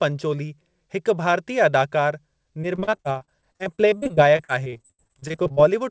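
From 2.62 s to 5.59 s the speech turns choppy and robotic, with pieces dropping out. This is repeated packet loss (robotic sound): dozens of short dropouts, the longest about 70 ms, arrive in quick succession, and each gap is papered over by stretching the last bit of audio, so about 30% of that stretch is concealment. The band-limited tone, with nothing above 8 kHz, fits a G.722 wideband call codec.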